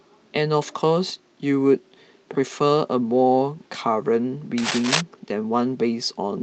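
From 4.58 to 5.01 s, cable scratch noise appears: dense, uneven scratching roughly as loud as the speech, likely from a worn connector's contact resistance fluctuating.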